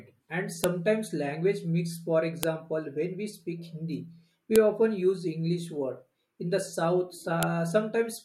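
Four sharp snaps cut through the speech at 0.64 s (before "language mix"), 2.43 s, 4.56 s (before "often use") and 7.43 s (after "the south"). Each is a file header played as audio. Pieces were joined with their headers intact, so those bytes sound as a click. On a waveform each shows as a narrow spike, and a spectrogram shows a thin full-band vertical line.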